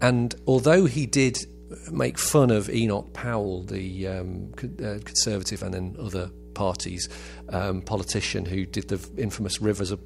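A steady mains hum runs under the speech from start to finish. It sits at 60 Hz, a low, constant drone with a few low harmonics above it. Power-line current has leaked into the signal, most likely through a ground loop or a transformer close to the recording chain. The hum stays some way below the speech, at roughly 20 dB down. It never stops, so it is most exposed in the pauses.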